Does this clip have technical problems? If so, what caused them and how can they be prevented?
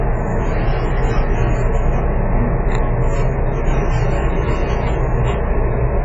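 Yes. Throughout the clip the audio is dull and smeared, with nothing above 7.5 kHz and a warbling, fizzy texture on sustained sounds. This is heavy AAC compression damage, likely from AAC-LC at a very low bitrate, around 12 kbps. With too few bits, the encoder lowers its cut-off, then quantises the remaining spectral lines so coarsely that bands drop out or are filled with substitute noise, which smears detail. To prevent it, encode at a higher bitrate or use a codec suited to low rates.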